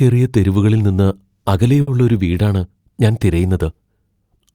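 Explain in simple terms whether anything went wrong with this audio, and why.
A short stall from a late packet happens at about 1.81 to 1.89 s, just before "ഒരു വീടാണ് ഞാൻ". One piece of the speech arrived over the network later than it was needed, so the player had nothing new to play. Rather than going silent, it held the last sound for about 60 ms until the piece turned up, then carried on from the same spot. Nothing is lost, but that moment sounds briefly drawn out, and everything after it plays about 60 ms later than it should.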